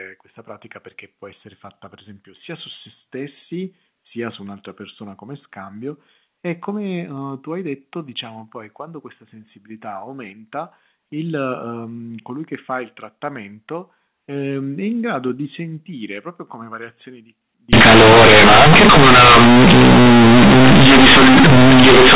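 Companded audio read as linear runs from 17.73 s to 22.15 s in this telephone-band speech: A-law bytes are played as plain 8-bit samples without expansion, so quiet sound becomes as large as loud sound and pauses fill with harsh, buzzy noise.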